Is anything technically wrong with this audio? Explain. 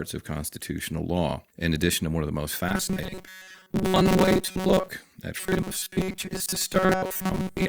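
Yes. The speech turns into robotic sound from repeated short buffers from 2.69 to 4.90 s and again from 5.38 s to the end at 7.68 s. In both stretches the voice becomes a rigid, metallic buzz fixed at 188 Hz that only loosely tracks the speech. The likely cause is audio arriving too seldom, so playback loops a segment of about 5.3 ms (one over 188 Hz) in place of most of the real signal, which is skipped.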